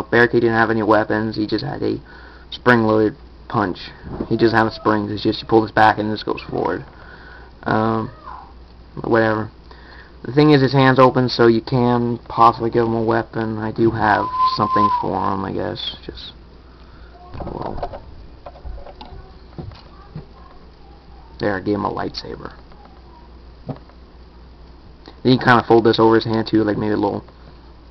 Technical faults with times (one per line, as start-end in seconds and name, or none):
none